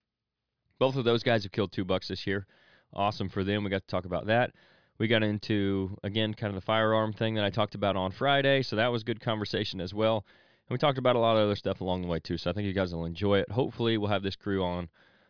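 No technical faults are audible.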